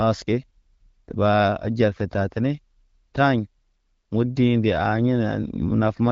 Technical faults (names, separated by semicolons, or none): none